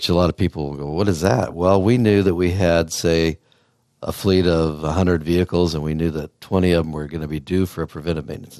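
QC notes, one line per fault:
throughout: MP2 compression. The sound is dull and carries a steady gurgling, granular roughness, likely from MPEG Layer II coding, which fits a rate around 80 kbps. Upper sub-bands drop out and the remaining bands are coarsely quantised. Unlike error burbling, this damage is continuous rather than sudden.
1.49–1.51 s: DAB burbling. A brief burst of burbling lasting about 20 ms, spanning a few audio frames, is laid over the speech. A scattering of bit errors, roughly 0.1%, has slipped past error correction into the audio data, putting short blips of noise into single sub-bands. This sets it apart from the steady compression roughness.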